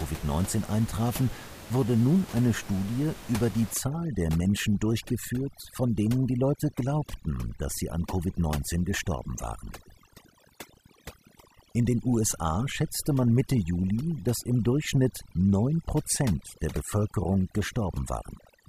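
From 3.74 s, just after "über die", to the end of the clip, the speech shows overdone noise removal. A noise reducer set too aggressively is pulling individual frequency bands down whenever they sit near its noise estimate. The room noise, about 16 dB below the speech, drops and breaks up into twinkling specks, and the quieter parts of the voice go too. Unlike a noise gate, which mutes everything at once, this removal works band by band.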